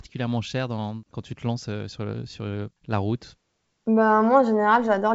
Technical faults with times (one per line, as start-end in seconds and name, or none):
none